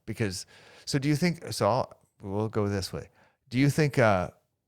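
No technical faults are audible anywhere in this speech recording.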